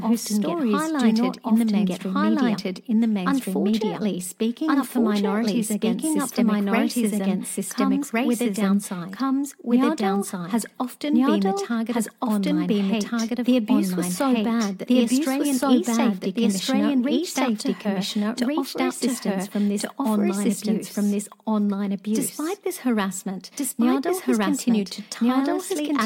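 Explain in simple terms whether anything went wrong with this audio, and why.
Everything said is heard twice, all the way through: a second copy, just as loud as the first, follows about a second and a half behind, with no echo fade. This is a doubled audio track, likely because the sound was captured again by a slower path.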